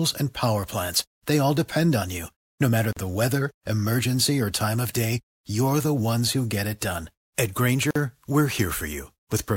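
At 2.93 s, just before "the weather emergency or", and at 7.91 s, the speech drops out for 39.5 ms and 48.6 ms. These are gaps at a join of encoded pieces, where untrimmed encoder delay and end padding were left in. Each appears as a flat, silent stretch in the waveform and a blank vertical strip in the spectrogram, with smeared edges.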